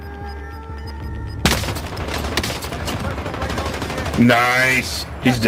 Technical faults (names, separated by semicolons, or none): none